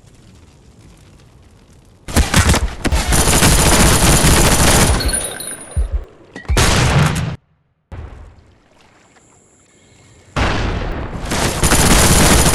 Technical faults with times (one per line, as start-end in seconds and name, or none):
2.92 dropped buffer (overrun)
4.48 dropped buffer (overrun)
6.04 dropped buffer (overrun)
10.92 dropped buffer (overrun)
11.88 dropped buffer (overrun)